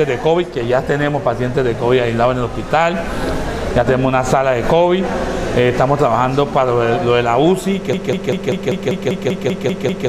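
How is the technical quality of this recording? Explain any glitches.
The recording has one clear fault, a broken-record loop. From 7.93 s to the end, a 195.6 ms fragment repeats exactly, back to back, eleven times. The likely cause is a stalled player or stream resending its last buffered piece, so the audio that belonged there is lost.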